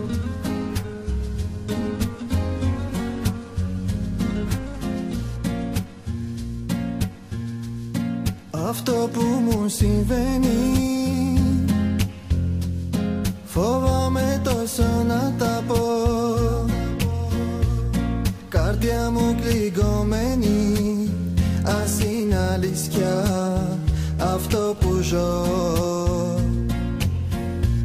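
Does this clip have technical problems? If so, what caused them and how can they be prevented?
No, nothing here calls for fixing, so there's no cause to track down and nothing to guard against.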